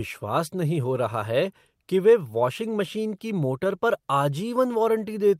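Just speech, and honestly there's nothing technically wrong with it to point out.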